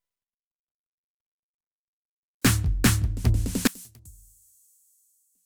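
From 3.67 s onward, the music drops about 26 dB to a faint remnant, likely one channel inverted, so shared content cancels in mono.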